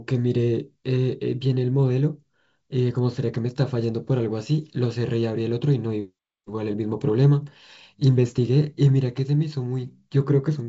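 Nothing stood out as a technical fault on listening to this speech clip.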